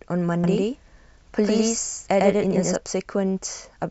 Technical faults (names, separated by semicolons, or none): doubled audio track